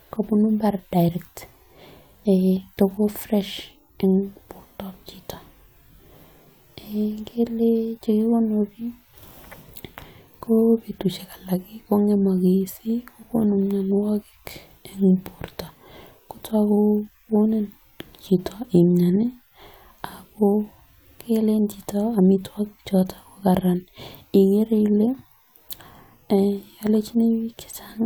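No audible technical faults occur anywhere in the recording.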